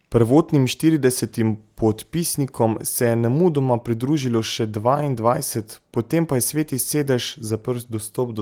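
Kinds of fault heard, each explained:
No faults can be heard in this speech clip. It has passed through Opus voice compression at a rate that fits 24 kbps, in the hybrid mode that adds a CELT layer above the SILK band, and the full band has been kept, with content reaching about 20.4 kHz and only light coding damage.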